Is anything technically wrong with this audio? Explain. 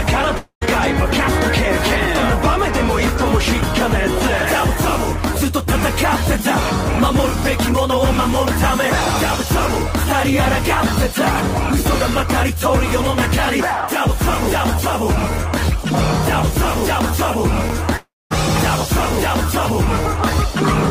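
Yes. From 0.37 to 0.63 s and from 17.97 to 18.32 s, the sound smears into a fading buzz, then drops to silence for about 90 ms and 230 ms before resuming with about 240 ms and 340 ms gone. This is likely a long network dropout, with the receiver stretching the last sound to cover the gap.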